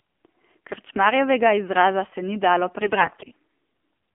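Speech heard through an AMR narrowband mobile codec throughout, with a stretch of AMR bit errors near the end. Nothing passes above about 3.4 kHz or below about 250 Hz, and the voice has a buzzy, synthetic edge. That edge is what separates this from a simple telephone band filter: the codec rebuilds the voice from a vocal-tract model driven by sparse pulses, and the low rate it can afford, which fits the 7.4 kbps mode, leaves that rebuilding plainly audible. From 2.80 to 3.32 s the AMR bit errors turn the voice hoarse, scratchy and gargly. Unlike lost packets, there are no gaps, mutes or repeated fragments, and pitch and loudness stay roughly intact. The frames still arrive and decode, but flipped low-priority bits misplace the excitation pulses and skew the fine gain and spectral values. The damage fits nearly every 20 ms frame in that half second being hit, at a high error rate of roughly one bit in ten.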